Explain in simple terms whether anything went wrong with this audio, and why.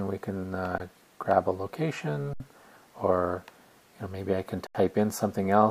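Three brief freezes can be heard, each an underrun with held sample. They occur at 0.78 to 0.80 s, 2.33 to 2.40 s, and 4.67 to 4.75 s. They last about 20, 67 and 80 ms. The playback system ran out of audio to send. Instead of going silent, it held the last value steady. So the sound simply stops, with almost no click. Nothing was skipped. Each time, the audio picks up where it stopped, so it resumes fairly softly.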